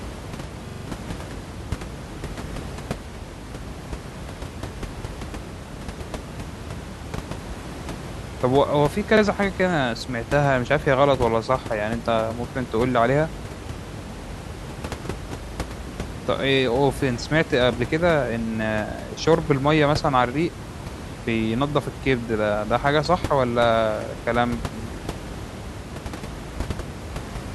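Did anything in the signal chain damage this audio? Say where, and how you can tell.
Yes, a repeated buffer in the driver: 43 ms chunks stutter with hard joins at 0.68–0.85, 9.17–9.22 and 15.45–15.53 s, which fits a starved 2048-sample buffer.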